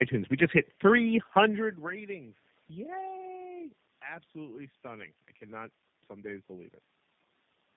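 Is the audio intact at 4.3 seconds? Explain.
No. At 4.3 seconds the speech carries tandem speech coding, which runs through the whole clip. The sound points to a call passed through three speech codecs in a row, likely AMR-NB twice and then G.729A, each re-coding the previous one's degraded output. The voice is rough, muffled and warbly. A spectrogram shows a hard ceiling near 3.7 kHz with blurred, wavering harmonics below it, and the waveform looks grainier than clean speech.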